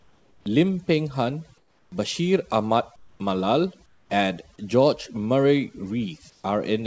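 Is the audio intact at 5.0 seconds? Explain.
No. At 5.0 seconds, as throughout the clip, the speech suffers from overdone noise removal. A noise reduction stage set far too aggressively pulls individual frequency bands down to nothing whenever they sit near its noise estimate, taking the softer parts of the speech with them. The background drops and breaks up into twinkling specks. Separately, nothing reaches above 8 kHz, which fits a G.722 call codec.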